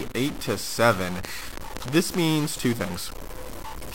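Throughout the speech a harsh, buzzy distortion sits on every syllable and fills the pauses with hiss, likely a stuck bit with a step around -30 dBFS; the waveform shows about half the samples off by that bit's weight. From 1.25 to 2.15 s, just before "means two", a train of clicks of roughly seven pops at about 5.6 per second, unevenly spaced and well above the speech, appears as thin vertical spectrogram lines, likely from interference.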